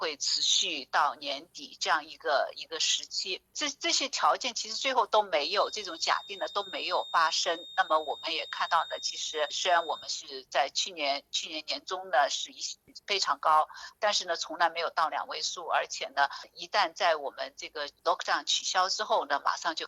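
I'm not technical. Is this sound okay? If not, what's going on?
No. From about 5.37 to 10.16 seconds, a thin, steady whistle near 3.7 kHz sits quietly under the sound, swelling and fading slowly. This is a feedback whistle, likely from a loudspeaker's output leaking back into the microphone. Unlike a runaway howl, it never builds up into one.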